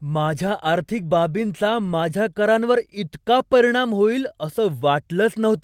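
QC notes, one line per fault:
Throughout: clock drift between sender and receiver. The sender's clock runs roughly 2% slower than the receiver's, so the jitter buffer keeps draining. Unlike random network jitter, the timing error always leans the same way, producing a steady lag rather than scattered, two-directional wobbles.
0.78–5.58 s: repeated timing corrections. To refill its starved buffer, the receiver repeatedly duplicates short slices, playing this stretch at about 98% speed and adding roughly a tenth of a second overall. The hiccups are small, unevenly spaced and all lengthening, unlike packet-loss concealment, which patches isolated gaps.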